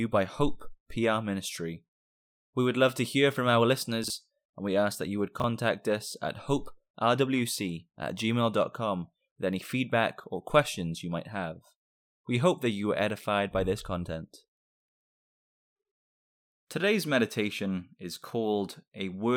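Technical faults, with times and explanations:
4.04–4.10 s and 5.40–5.44 s, chunks out of order: a 20 ms block of speech plays two blocks late in the first instance and one block late in the second. No audio is lost, but the reshuffled sequence briefly garbles the sound and each reordering leaves three abrupt joins.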